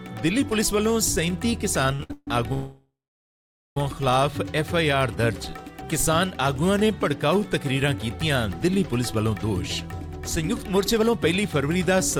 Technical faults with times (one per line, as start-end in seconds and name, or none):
1.93-2.11 short stall from a late packet
2.13-2.28 call audio freeze
2.53-3.77 call audio freeze
10.13-12.19 jitter buffer speed-up